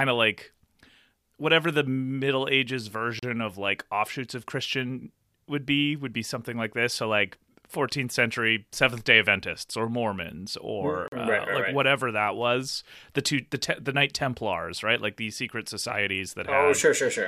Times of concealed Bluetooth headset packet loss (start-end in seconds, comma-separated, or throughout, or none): none